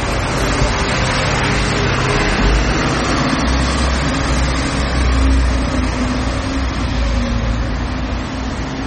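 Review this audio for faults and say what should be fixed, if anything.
Throughout the clip the sound has a watery, swirling quality, with smeared attacks and metallic chirps on bright transients. These are the marks of MP3 compression, likely at a very low bitrate around 32 kbps. Starved of bits, the encoder cuts everything above 11.7 kHz and drops quiet frequency lines that flicker in and out between frames. A spectrogram shows a hard ceiling at 11.7 kHz and speckled, patchy high-frequency content below it. To prevent this, keep a lossless or high-bitrate source and avoid heavy MP3 encoding.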